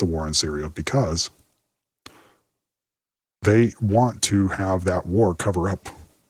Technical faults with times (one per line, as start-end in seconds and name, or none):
none